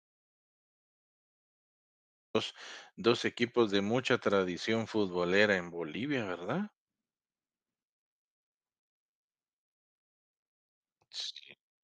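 Speech clip, and the first 2.35 seconds are an audio dropout to silence: the file opens on silence, with no room tone or hiss at all, and the speech only arrives at 2.35 s, cutting in mid-flow rather than starting cleanly. The gap was already under way when the file begins. That pattern likely comes from the input being lost, say a disconnected mic, a dropped link or a mute left on, while the recorder kept writing silence, so whatever came before 2.35 s is simply gone.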